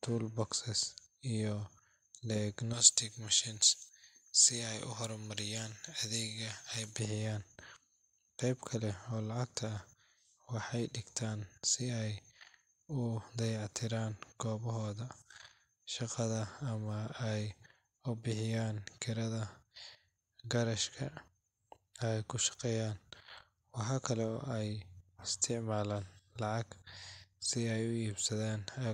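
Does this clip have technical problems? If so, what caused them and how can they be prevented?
Yes. From 2.73 s to 6.99 s the speech has pre-emphasis left on: the treble lift applied before recording or transmission was never undone by the matching de-emphasis. The top end sits about 11 dB higher at 10 kHz than at 1 kHz, a tilt that fits a J.17 curve, so the passage sounds thin, bright and hissy on sibilants. To prevent it, make sure the decoder or receiver applies the same de-emphasis curve as the encoder.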